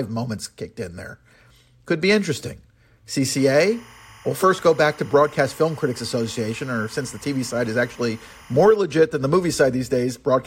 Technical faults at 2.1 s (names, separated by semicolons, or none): none